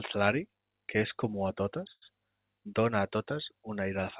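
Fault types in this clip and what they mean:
Short stall from a late packet: a late packet emptied the buffer. The last sound of "comú a totes" is stretched 97 ms, with nothing lost.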